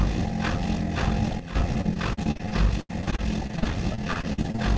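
A recording of everyday sounds, band-limited at 8 kHz as a wideband call codec such as G.722 would leave it. From 1.40 to 1.55 s a sudden gain jump drops everything about 10 dB at once, likely an unramped digital gain change; unlike a fade, sound and background shift together instantly. From 1.74 to 4.60 s repeated packet loss produces choppy, robotic sound: many short holes, the longest 79 ms, are patched by stretching the preceding audio, covering about a fifth of that span. The repetition marks it apart from simple dropouts.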